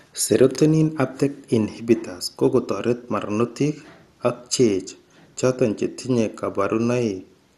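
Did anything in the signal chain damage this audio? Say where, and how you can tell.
Yes, at the codec stage. The whole speech clip sounds dull, with nothing above 12.2 kHz and a gurgling, granular edge throughout. That's likely MP2 compression at a rate that fits 64 kbps: upper sub-bands get switched off and the remaining ones coarsely quantised.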